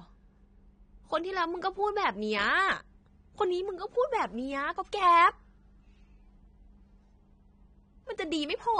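Speech throughout, with plainly audible AAC compression damage across the whole clip. Nothing is present above about 9.7 kHz, so the top octave is missing and the sound is dull. Quantisation against a hearing model has thinned the spectrum, leaving a smeared, warbling texture on sustained sounds and fizz on sibilants. The likely cause is low-bitrate AAC-LC encoding, which fits a bitrate around 32 kbps.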